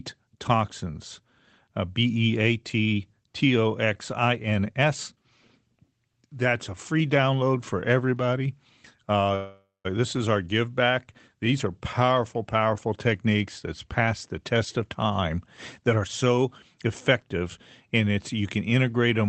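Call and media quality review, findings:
Call audio freeze, 9.35–9.87 s, just before "this is our give": likely jitter buffer underrun after delayed packets. About 0.5 s of concealment: the last sound is stretched into a fading buzz or hiss, with about 180 ms of silence. Playback then resumes, adding roughly half a second of delay; nothing is lost.

Jitter buffer speed-up, 13.72–14.08 s (108%) after "are powerful powerful techniques", 14.55–15.38 s (107%), and 15.82–17.43 s (106%). The receiver drains excess buffered audio by cutting repeated pitch-period slices, roughly 40, 70 and 100 ms. The pitch is unchanged but delivery sounds hurried. Band-limited to 8 kHz by the call codec.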